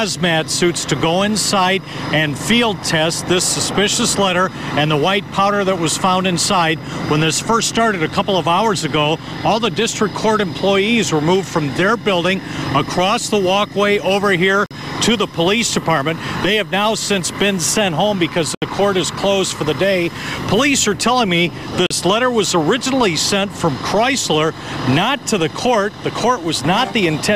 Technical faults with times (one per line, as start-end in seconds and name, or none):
14.66-14.71 Bluetooth stall
18.55-18.62 Bluetooth stall
21.86-21.90 Bluetooth stall